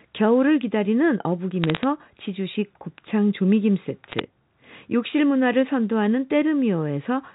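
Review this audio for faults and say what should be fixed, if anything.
Sharp ticks and a brief crackle over the speech appear from 1.64 to 1.84 s and again from 4.12 to 4.20 s. These are bit errors on a digital phone line. Flipped bits in the G.711 stream, at a few tenths of a percent, each corrupt a single sample, and hits on sign or high bits jump out as clicks. Error protection or a cleaner line would prevent them.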